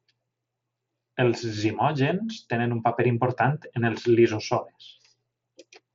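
Speech carried over a Bluetooth mSBC headset link, with nothing above 7.7 kHz as that wideband codec's band limit implies, and no technical faults present.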